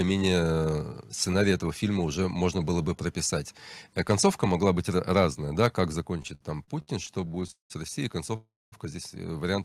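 Microphone overload at 4.10–4.14 s and again at 5.16–5.25 s: the loudest peaks go about 2 dB past the converter's limit and their tops are sheared flat, roughly one to two percent of samples, giving a brief harsh crackle. The likely cause is microphone input gain set too high for the converter.

Microphone volume stepped down at 6.00 s: the whole signal, speech and background alike, drops by about 4 dB in one abrupt step. Coming shortly after those distorted peaks, this is likely the call software cutting the device's input gain to stop the clipping.

Repeated stalls (stutter) from 6.17 to 7.72 s: packets arrive late again and again, the jitter buffer keeps running dry, and the receiver stretches the last sound to cover each wait. There are nineteen hitches, the longest 192 ms, together about 0.5 s of filler, a third of that stretch. Nothing is lost, but the speech drags and stutters.

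Call audio freeze from 8.36 to 8.74 s: the sound hangs, a brief smear of the last sound fading into about 0.23 s of silence. The likely cause is packets held up in transit emptying the jitter buffer. When they arrive, the speech picks up where it stopped, now running 0.36 s late, with nothing missing.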